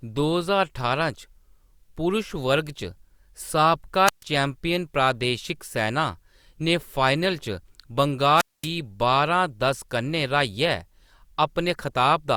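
The analogue FM radio link weakens until the receiver's squelch cuts the output, a wireless microphone squelch dropout. At 4.05 to 4.24 s, hiss swells into a muted hole of 0.14 s before "चैम्पियन प्रादेशिक सैना" returns. At 8.35 to 8.68 s, the silent gap lasts 0.23 s.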